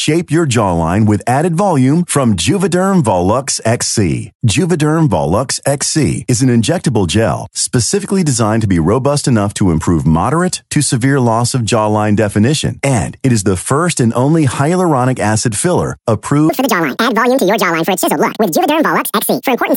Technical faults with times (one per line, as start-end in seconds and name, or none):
16.49-19.77 wrong sample rate